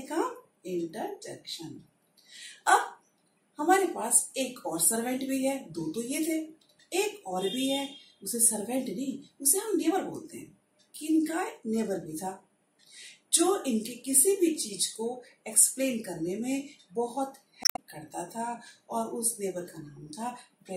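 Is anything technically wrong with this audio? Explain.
Yes. From 17.62 to 17.79 s there is damaged data in the compressed stream: the decoder misreads corrupted frames and loses sync, producing a brief chirp, squawk, click or short hole lasting about 0.17 s.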